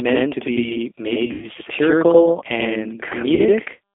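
Right from the start the speech doubles: one channel runs about 93 ms late, which fits a 4096-sample buffer, so summing to mono leaves a same-level slap echo. The whole clip has the rough, slightly synthetic edge of the G.729 codec, likely around 8 kbit/s, with the band squeezed to roughly 300 Hz–3.5 kHz. From 1.26 to 1.48 s there's VoIP packet loss concealed by the speech codec: about 120 ms lost in bursts, the longest near 100 ms. The decoder stretches the last sound into a fading buzz or coloured noise, and the speech stays weak for a moment after. Around 3.35 to 3.41 s a shorter 40 ms dropout gets the same brief concealment smear.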